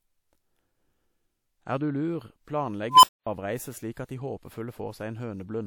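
At 2.89 s an unstable filter sets in: a recursive filter's feedback diverges, so a tone around 1 kHz swells over about 140 ms into a loud squeal, then the arithmetic overflows and the speech drops out for about 235 ms, until 3.27 s.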